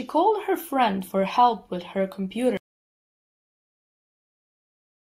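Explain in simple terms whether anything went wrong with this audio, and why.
Something did go wrong: at about 2.57 s the speech cuts off mid-flow and never comes back. That's an audio dropout to silence, with silence and no room tone through to the end, most likely because the input was lost while recording carried on.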